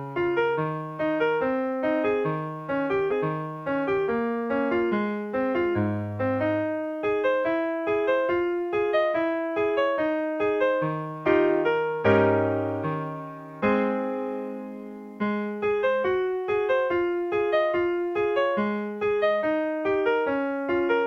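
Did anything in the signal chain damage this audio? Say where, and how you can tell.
Yes. The damage sits at the streaming playback stage, where the player handles incoming segments. From 3.07 s to 4.04 s a stretch of audio plays a second time, a repeated stream segment that adds about 0.98 s to the running time. A brief blip marks the jump back at 3.07 s, where the waveform discontinuity lands. The mechanism is the same chunk being fetched or queued twice, so the player renders it again before resuming normal order.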